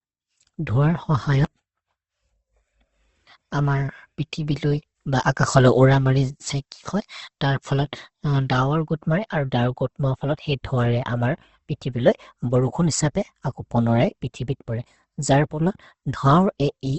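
From start to finish, the speech sounds noisy, rough and grainy. It is band-limited too, with nothing above about 8.1 kHz. That points to Opus compression as the likely cause, running in its music-style mode at a low rate, perhaps around 16 kbps. With too few bits, the encoder keeps each band's energy but fills in detail by folding lower bands or adding noise. That swaps clean harmonics for a fuzzy, gritty texture rather than the swirl you'd get from MP3.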